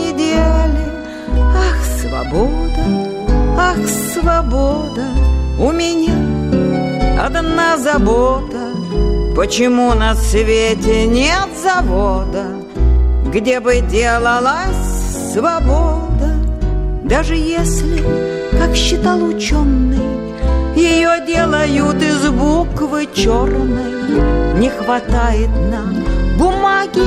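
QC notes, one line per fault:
No faults heard anywhere in the clip.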